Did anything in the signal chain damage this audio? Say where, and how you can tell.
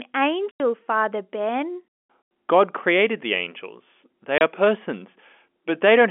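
Yes. The damage is in the network stage, as packet loss filled with silence. The speech drops out completely from 0.51 to 0.60 s and from 2.22 to 2.31 s, each gap 90 ms, and again from 4.38 to 4.41 s for 30 ms. Each hole starts and ends abruptly. The lengths are whole multiples of 30 ms, which fits packets of that size going missing, with the receiver inserting silence instead of concealing the gap.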